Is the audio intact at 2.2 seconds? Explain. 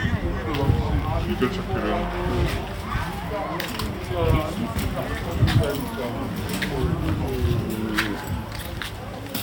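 No. At 2.2 seconds, as everywhere in the clip, the sound runs slow and sits low, at about 0.73 times its proper speed and roughly five and a half semitones down. This is a wrong sample rate fault: the samples are being played back more slowly than they were captured, with no conversion, so duration and pitch shift together by the same ratio. The drop fits 44.1 kHz material played at 32 kHz.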